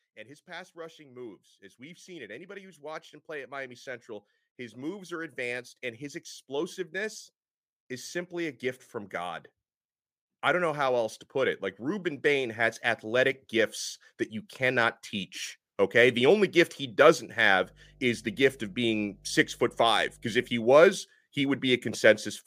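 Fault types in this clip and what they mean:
Automatic gain rising: The automatic gain control treats the input as too quiet and keeps raising its gain. Here it climbs slowly by about 23 dB from 0.13 s to 17.07 s, so the speech and the background noise swell together rather than the voice alone getting louder. On a waveform the envelope widens steadily across that stretch. On a spectrogram the whole frequency range, including the noise floor between phrases, brightens gradually.
Mains hum: Power-line interference, from a ground loop or a nearby transformer, leaks into the signal as a steady low tone. In this clip it sits at 50 Hz from 17.62 s to 20.58 s, roughly 25 dB below the speech, so it drones quietly underneath. A spectrogram shows a thin, unbroken horizontal line at 50 Hz, with possible faint harmonics above. A zoomed waveform shows a slow periodic ripple in the gaps between syllables.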